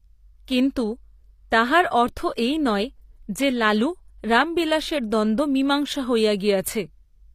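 From start to finish the speech carries plainly audible HE-AAC compression damage, likely from that codec at a low bitrate around 24 kbps. The treble is still bright but rebuilt from copied lower bands rather than the original, so s sounds turn gritty and lispy, with a metallic sheen whose harmonics don't line up with the body of the voice. Unlike a simple low-pass, which only dulls the top, the highs here remain present but synthetic up to a hard ceiling at 15.5 kHz.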